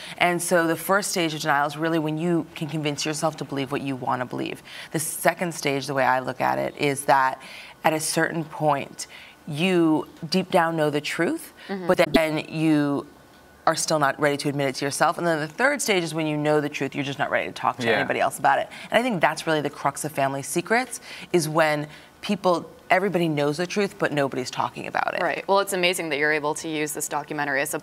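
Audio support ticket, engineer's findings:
Frames out of order, 11.93–12.17 s. Two adjacent frame runs, each about 104.5 ms, decoded in swapped order, consistent with a reordering fault in the jitter buffer or packet queue. Block length fits runs of four frames. Result: roughly 0.23 s of audio plays second half first, heard as a garbled flutter. Total duration unchanged; no audio lost or added.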